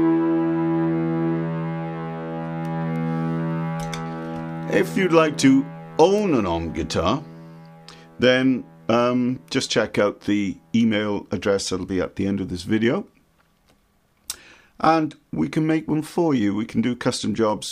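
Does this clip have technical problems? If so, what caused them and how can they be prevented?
Yes. Two sharp, broadband ticks at 2.96 s and 6.18 s, unrelated to the surrounding sound, are bit error spikes. A single flipped bit in memory or on a digital link briefly throws the sample value off by a power of two. To prevent them, use error-checked digital transfers along with reliable memory, cabling and clocking.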